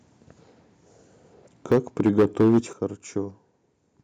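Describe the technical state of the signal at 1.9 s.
At 1.9 s the speech sits inside a stretch of clipping, from 1.71 to 2.59 s, consistent with microphone overload. Peaks are flattened at the converter's limit, with roughly a tenth of samples clipped, giving the loudest syllables a harsh, crackling edge. The likely cause is input gain set about 9 dB too high for the converter.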